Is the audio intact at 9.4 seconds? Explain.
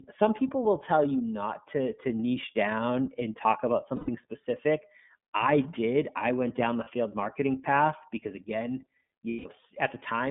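No. Between 9.29 and 9.46 s, packets went missing and the decoder had nothing to play for about 150 ms, which fits five lost 30 ms frames. This is lost iLBC frames: the decoder filled the gap by repeating the last pitch cycle blended with noise. The result is a held, slightly buzzy, breathy vowel that then snaps back to normal speech almost immediately, because each iLBC frame decodes independently. Beneath that, the whole clip passes through the iLBC codec, which is consistent with its 30 ms, 13.33 kbps mode. It keeps only about 150 Hz to 3.6 kHz, so the speech sounds band-limited, rough and audibly synthetic.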